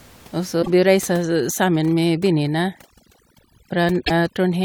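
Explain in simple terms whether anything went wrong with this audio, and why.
At 0.59 to 0.68 s and again at 4.02 to 4.11 s, damaged data in a compressed stream makes the decoder misread frames and lose its place, causing short glitches. From 1.22 s to the end, overdone noise removal mutes the faint room noise along with quiet parts of the voice, leaving twinkling specks.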